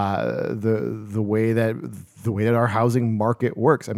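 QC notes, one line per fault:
No faults were found in this recording.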